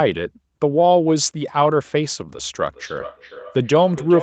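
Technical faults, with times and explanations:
2.61–4.22 s, feedback echo between two devices: another device's playback re-enters the microphone, repeating speech about every 0.4 s; the spectrogram shows evenly spaced, thinning copies.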